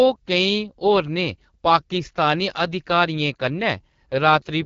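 From start to end, the speech passes through the AMR wideband (HD Voice) codec at a low rate, which fits about 8.85 kbit/s. Damage is plainly audible: rough, raspy texture, nothing above 7.5 kHz.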